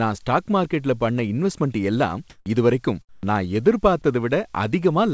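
Just after "இன்வெஸ்ட்மென்ட் எல்லாம்", from 2.30 to 2.46 s, the background is replaced by comfort noise for 160 ms, likely because the sender's voice detector judged the pause silent and stopped transmitting, leaving the receiver to synthesise a stand-in. The natural background, already about 37 dB below the loud parts, gives way to a smooth, featureless hiss about 9 dB louder before "இதுவரைக்கும் நான்" resumes. A spectrogram shows a flat, evenly textured noise block with clean vertical edges, like the rest of the clip stopping at 8 kHz as expected of a wideband call codec. The same happens after "இன்வெஸ்ட்மென்ட் எல்லாம் இதுவரைக்கும்", from 3.09 to 3.23 s, for 140 ms. The background there sits about 41 dB down, and the synthetic fill is about 15 dB quieter, so the gap sounds like a brief drop into near-silence. In the waveform this appears as a sharply shrunken, uniform envelope.

At 3.21 s, the end of that second gap, the onset is clipped by the voice detector. 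Comfort noise likely covers the first 20 ms of the returning sound, so it starts abruptly without its soft build-up. In the waveform, full amplitude begins with a hard step rather than a ramp. A spectrogram shows the sound's energy appearing at once at full strength with no faint leading edge.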